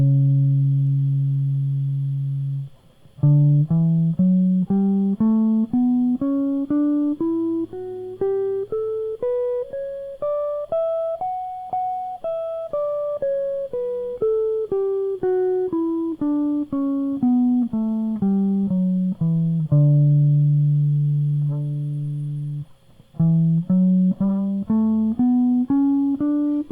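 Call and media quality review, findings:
No audible faults found in the music recording.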